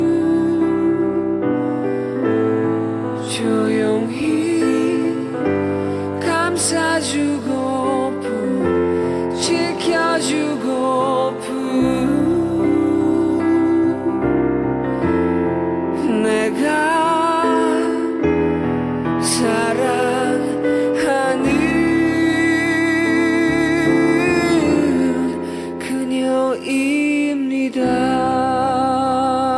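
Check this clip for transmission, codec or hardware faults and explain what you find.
Nothing wrong turns up anywhere in this recording.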